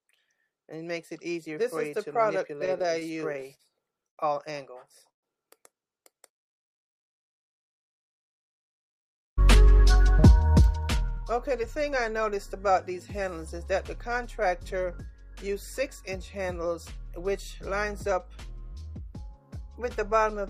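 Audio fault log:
2.59–4.20 s, repeated stalls (stutter): the sound keeps catching and resuming, 13 brief holds across 1.6 s with the longest about 94 ms, together filling roughly 261 ms or 16% of the span. The receiver's buffer ran dry again and again and bridged each wait by extending the last sound, so nothing is lost but the flow drags. What separates it from a single freeze is the rapid train of short catches rather than one stop.
5.09–5.26 s, call audio freeze: the sound halts once, trails off, and then sits silent for about 120 ms of a 136 ms hold before carrying on exactly where it stopped. The likely cause is packets held up in transit that left the jitter buffer empty, so the receiver faded its continuation and waited, inserting 136 ms of extra delay. Unlike the stutter, this is one clean gap going to silence.
6.14–7.06 s, jitter buffer slow-down: the sound runs at about 95% speed with its pitch unchanged, stretched by a total of about 51 ms, giving a slightly drawn-out quality. 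The receiver was rebuilding its reserve by repeating single pitch periods and pause fragments many times over. It differs from a stall because no gap or hold is audible, only an even elongation of the ongoing sound.
8.89–12.91 s, jitter buffer speed-up: for about 4 s the sound runs at about 105% speed at the same pitch, a bit hurried, with roughly 0.2 s taken out in total. The buffer held more audio than its target, so the receiver trimmed small slices of one or a few pitch periods repeatedly to shed delay. It is the mirror of the slow-down: a pitch-steady compression rather than stretching, with no breaks.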